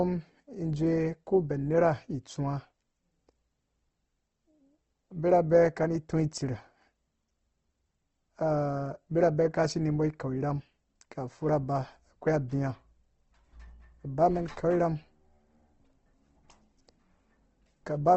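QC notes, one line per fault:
throughout, Opus compression: speech sounds grainy and rough, with nothing above 8.2 kHz; likely Opus music mode noise-filling starved bands, which fits about 16 kbps.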